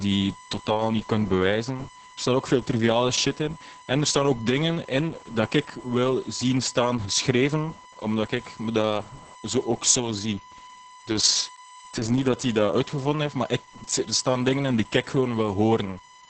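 From start to finish, a steady USB whine sits under the speech. It is a fixed tone at 1 kHz, roughly 25 dB below the speech. The bus draws current in 1 ms frames, and that pulsing leaks into the audio through power or ground.

The whole clip also carries heavy Opus voice compression. Nothing is left above about 8.8 kHz. The speech sounds muffled, hoarse and slightly robotic, with coarse, smeared texture. This fits the SILK voice coder at a very low bitrate, around 10 kbps.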